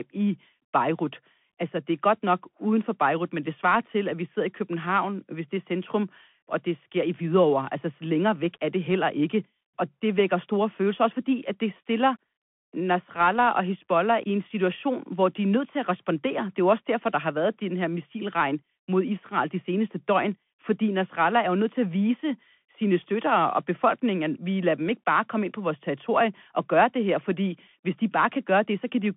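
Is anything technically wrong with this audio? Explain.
Yes. Throughout, the speech carries Bluetooth CVSD headset codec damage. The one-bit delta coding leaves nothing above 3.8 kHz, scratchy s sounds and granular hiss, which fits a 64 kbps link.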